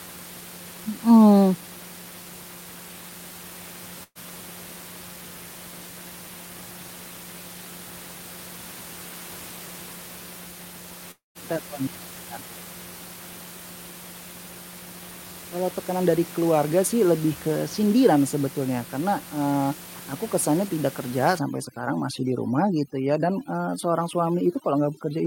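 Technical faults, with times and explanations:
4.03–4.18 s, burst of packet loss: a fading concealment sound, then brief silence, before speech resumes with about 120 ms skipped; consecutive packets were lost or arrived too late and were concealed.
11.11–11.38 s, long network dropout: a decaying buzz or hiss gives way to silence, and roughly a quarter second of speech vanishes, likely from a stall in the network delivery.
21.39–25.26 s, overdone noise removal: right after "aku kesannya tidak kerja", quiet parts of speech drop out over twinkling near-silence, as heavy denoising gates bands near the room noise's level.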